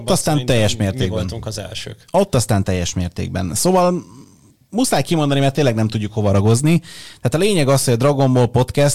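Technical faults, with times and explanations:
Throughout, hard clipping: the speech is driven about 3 dB past what the stage can pass, so roughly two percent of samples get sliced flat at the ceiling. Those squared-off peaks throw harmonics high up the spectrum, which you hear as crackle riding the louder syllables.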